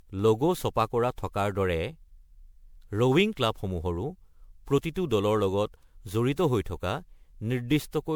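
From start to finish the speech has a swirly, smeared and hollow quality, with consonant attacks blurred and a watery texture that 128 kbit/s MP3 alone would not produce. Nothing reaches above 20.8 kHz. This is generation loss, likely from the audio being decoded and re-encoded around ten times through MP3. Each pass requantises on a shifted frame grid, so the noise and spectral gaps build up.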